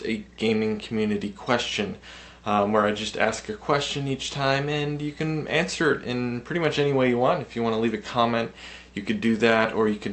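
Nothing is technically wrong with this audio; it comes through a WebRTC call path with no faults.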